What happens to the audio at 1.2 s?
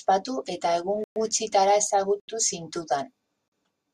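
Right after "eta egun" the speech drops into a block of digital silence. It runs from 1.04 s to 1.16 s, a 120 ms hole that ends just before 1.2 s. For that stretch the audio is silent. The signal cuts out with no fade and jumps straight back. At this length it is heard as a short, hard gap. It is not a soft dropout.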